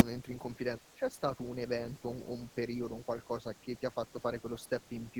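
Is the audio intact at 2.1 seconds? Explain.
Yes, the audio is intact at 2.1 seconds, with no dropout, click, distortion or other fault at that moment.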